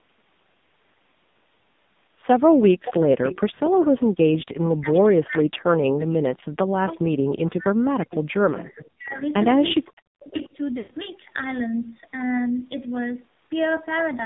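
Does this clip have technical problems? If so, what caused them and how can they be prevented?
Yes. Throughout, AMR narrowband mobile codec damage is heavy: sound is confined to 150 Hz to 3.7 kHz and is buzzy and synthetic, which fits a low mode near 5.9 kbps. The distinguishing sign is steady band-limited buzz rather than dropouts. A higher bitrate or wideband codec prevents it.

Echo leak appears at 2.85 to 3.88 s, 4.95 to 4.99 s, 8.11 to 8.9 s and 9.81 to 10.49 s. It is a copy of the sound delayed by about half a second, at about 10 to 20 dB below the speech. That is likely a far-end loudspeaker whose echo canceller let some through. A fixed half-second delay distinguishes it from reverberation. Headsets or better echo cancellation prevent it.

Speech suppressed in double talk occurs from 4.8 to 9.2 s and 9.86 to 10.34 s. The sound drops deeply, nearly to silence, while the other side talks. 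Overlap-timed cuts distinguish it from frame loss. Full-duplex-capable echo cancellation prevents it.

Lost AMR speech frames occur at 8.72 s (one frame) and from 10.78 to 10.92 s (120 ms). The decoder stretches the last sound and fades it. A drawn-out fade distinguishes it from suppression. Better radio coverage prevents it.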